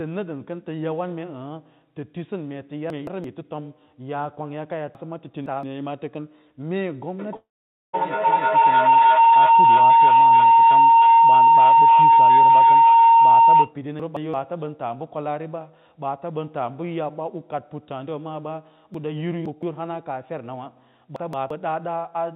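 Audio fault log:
2.90–3.24, 4.95–5.63, 14.00–14.34, 18.94–19.63 and 21.16–21.50 s, chunks out of order: a block of audio about 171 ms long reached the output late and played after blocks that should have followed it. It was one block late at 2.90, 14.00 and 21.16 s, and three blocks late at 4.95 and 18.94 s. No sound is missing, but each passage is jumbled and has hard joins where the misplaced block is spliced in.
7.19–13.77 s, feedback howl: two devices in the same room joined the call, so the sound went from loudspeaker into microphone and back around the loop, gaining level each time. Instead of dying away, the repeats narrow to a tone of roughly 1 kHz, with the loop coming around about every 0.3 s. At its peak it stands about 14 dB above the speech, and it continues for over six seconds until the loop breaks.
7.36–7.95 s, long network dropout: early in the howl the audio stops for about 0.58 s. 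Most of that gap is about half a second of plain silence, and the audio returns with the lost portion simply absent. The most likely cause is that no packets arrived for that stretch, leaving the receiver to fill about 0.57 s with a fading continuation of the last sound until the stream resumed.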